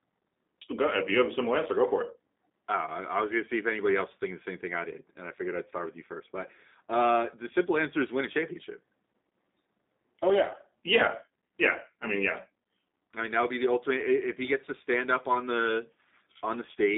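G.729 coding runs through the whole speech clip. The sound has been rebuilt from a vocal tract filter, a pitch predictor and a few pulses in each 10 ms frame, which fits an 8 kbit/s stream. The line passes roughly 200 Hz to 3.7 kHz, and nothing reaches above 3.8 kHz, so sibilants are dull and the speech has a plainly audible rough, synthetic edge.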